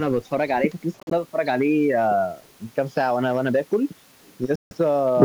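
Bluetooth dropouts occur at 1.00 s and 4.55 s, where the speech falls silent and then picks up further along, as if it had kept playing. The first breaks into short gaps, losing 70 ms across 112 ms (longest 42 ms). The second loses 154 ms before 4.77 s. Both are likely caused by packets arriving too late and being discarded.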